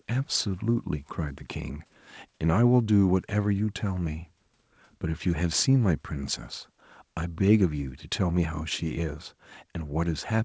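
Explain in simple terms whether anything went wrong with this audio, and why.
Nothing went wrong that I could hear in this speech recording, which sounds like a normal call with the usual slightly narrowed sound of a phone-style connection.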